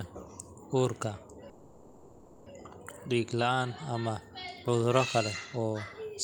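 Speech, with a faint high whistle running the whole way through, a switching supply whistle near 7 kHz, wandering between about 7.12 and 7.23 kHz at roughly 45 dB below the speech, the drift pointing to a power supply cycling in an audible burst mode. From 1.49 to 2.48 s the audio stalls into a held, fading continuation of the last sound with no silence. This is a call audio freeze, likely from delayed packets emptying the jitter buffer. Speech resumes where it stopped, so nothing is lost but about 970 ms of delay is inserted.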